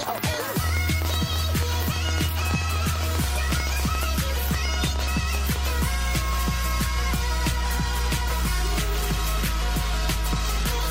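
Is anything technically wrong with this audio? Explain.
Yes, there are two faults. From 0.03 to 5.67 s, a train of clicks ticks and pops over the sound, about 50 at roughly 9.8 per second, unevenly spaced and around 10 dB above the signal. The likely cause is interference or a faulty connection or supply.

At about 10.22 to 10.27 s, the audio jumps ahead where compressed frames were skipped. Roughly two frames of about 46.4 ms each, around 100 ms of audio, were never decoded.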